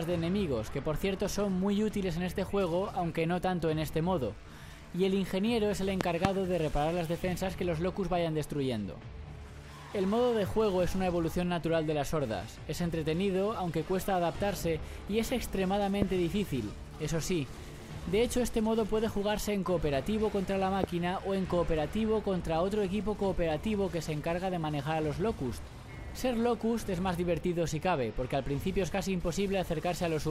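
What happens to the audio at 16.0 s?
A single loud pop, 16.02 to 16.04 s, peaks roughly 20 dB above the sound, likely from a sudden voltage pulse. It appears as a tall waveform spike and a full-height spectrogram stripe.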